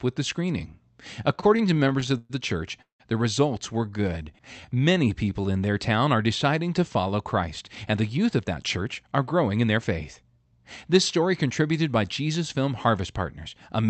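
Repeated stalls (stutter) run from 1.35 to 2.32 s: packets arrived late again and again, so eleven short gaps, the longest 121 ms, are filled by stretching the last sound, making the speech drag.

A call audio freeze follows at 2.82 to 3.02 s. The sound holds and fades for 182 ms, 130 ms of it near-silent, then resumes where it stopped, likely because packets were held up in transit.

Jitter buffer slow-down covers 3.78 to 5.66 s: the receiver repeated single pitch periods to rebuild its reserve, adding 297 ms, so speech plays at 85% speed with unchanged pitch.

Jitter buffer speed-up spans 7.47 to 10.59 s: with excess audio queued, the receiver trimmed about 0.3 s in small pieces, so speech runs hurried at 110%, pitch intact, over an Opus call path limited to 8 kHz.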